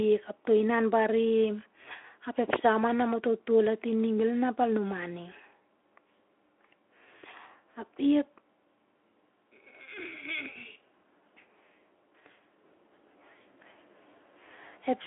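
No technical faults can be heard in this recording. The speech comes through a Speex codec path confined to a telephone-style band of roughly 300 to 3400 Hz, with nothing above 3.8 kHz and only light coding texture.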